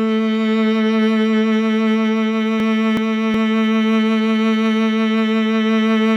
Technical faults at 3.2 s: chunks out of order

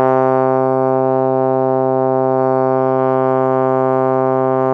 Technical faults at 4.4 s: time-stretched section

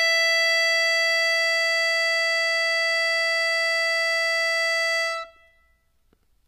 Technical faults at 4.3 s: HE-AAC compression

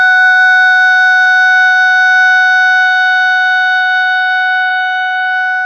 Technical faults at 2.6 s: none

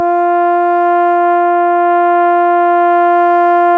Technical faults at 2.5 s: none

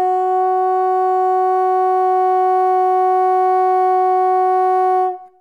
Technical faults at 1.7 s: none

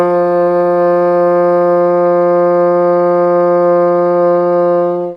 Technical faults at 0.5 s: none

